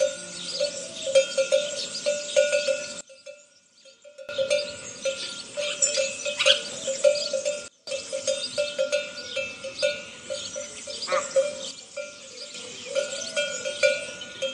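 At 3.01 s the level drops by about 21 dB until 4.29 s, then by about 24 dB from 7.68 to 7.87 s, and about 6 dB from 11.71 to 12.54 s. These are sudden gain jumps, with background falling together, likely unramped digital gain changes.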